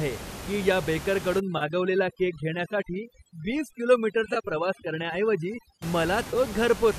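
From 1.40 to 5.82 s, overdone noise removal clamps down on the room noise, which otherwise sits about 12 dB below the speech. Bands near the noise estimate are pulled almost to nothing, so the background drops and breaks up into twinkling specks.

Within that stretch, AAC frame loss with concealment strikes at 1.58 to 1.63 s, a 30 ms gap that fits about three short frames of a likely low-delay AAC-ELD stream. The decoder rebuilds it from the last good spectrum, leaving a brief smeared, phasey patch. A 20 ms loss at 4.34 to 4.37 s sounds the same. From 6.25 to 6.36 s, about 50 ms goes missing in gaps of around 20 ms spread over 100 ms, giving a short run of noisy smears.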